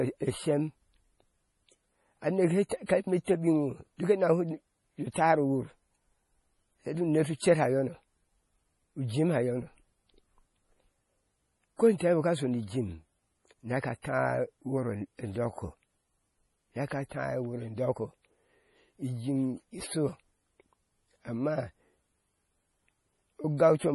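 Across the whole recording the speech sounds watery and swirly, with a hard treble ceiling at 11.4 kHz, which fits heavy MP3 compression at a low bitrate around 32 kbps. This is likely because the encoder, starved of bits, discarded weak frequency lines that flicker between frames.

Short hisses lead sharp onsets at 2.69, 2.86, 3.24, 5.13, 11.98 and 14.02 s, each spreading 22 to 33 ms ahead and softening the attack. This is pre-echo: quantisation noise, sized for the loud attack, smeared across the quiet start of its transform block.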